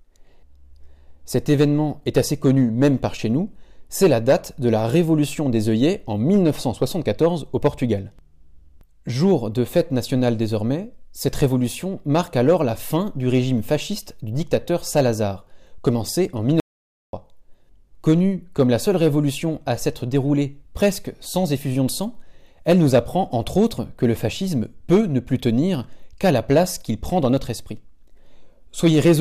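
At 16.6 s the sound cuts off abruptly into dead, total silence with no room tone, returning at 17.13 s. That half-second audio dropout to silence likely came from the input being lost while the recorder kept writing zeros, so that stretch is gone.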